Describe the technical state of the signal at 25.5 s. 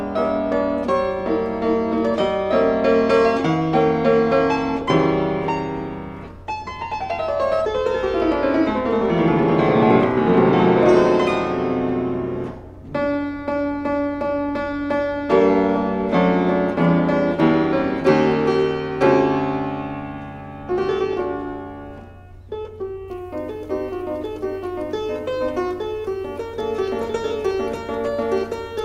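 At 25.5 s the signal carries pre-emphasis left on, running from 23.08 s to the end. A treble lift matching a 50 µs FM emphasis curve was applied upstream, and the complementary de-emphasis that should have undone it never happened. High frequencies therefore stand about 10 dB above 1 kHz at 10 kHz, so the sound comes across thin, bright and sibilant, with its upper range pushed forward against the body below.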